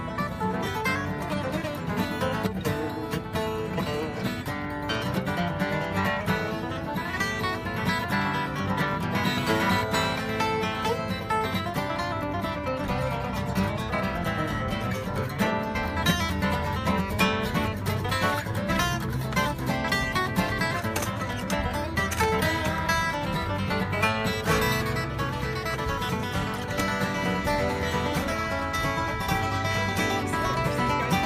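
No technical faults occur at any point in this audio.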